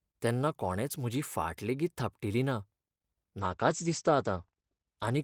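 A call bitrate drop starts at 3.43 s and runs to the end. Starved of bits, the encoder codes the speech coarsely and narrows its bandwidth from 20 kHz to 8 kHz, leaving it muffled and rough, consistent with a fall from about 32 to 13 kbps.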